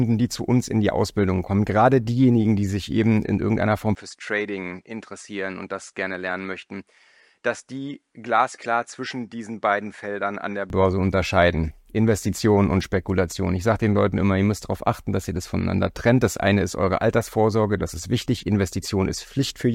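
Speech that turns duller and about 10 dB quieter from 3.95 to 10.70 s, with nothing above 10.7 kHz and a faint new noise floor. This is likely an input switched to a poorer device. The simultaneous changes in level, noise and tone distinguish it from a simple filter.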